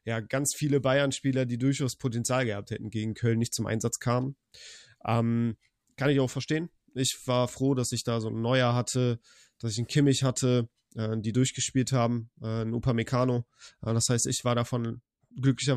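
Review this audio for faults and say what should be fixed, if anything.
Nothing stood out on listening to this speech recording, so there is nothing that needs fixing.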